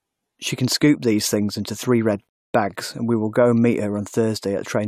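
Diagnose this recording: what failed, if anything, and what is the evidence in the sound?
A rebuffering stall at the playback stage: after "things into three red" the speech drops to silence from 2.29 s to 2.54 s, then resumes cleanly on "bags and we will". The player starved for data and waited. Unlike a dropout, nothing is skipped; the pause just adds 0.25 s.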